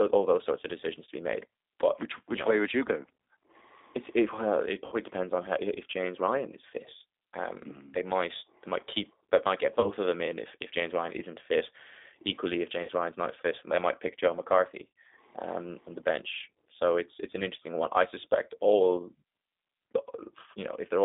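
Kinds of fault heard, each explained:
G.729 codec: an 8 kbit/s codec rebuilds the speech from a filter and a few pulses, leaving audibly rough, synthetic-sounding speech confined to about 250 Hz to 3.7 kHz.
VoIP packet loss concealed by the speech codec: lost packets were filled in by the decoder's extrapolation, giving brief buzzy, fading patches, such as after "it well it" and before "um on the bench".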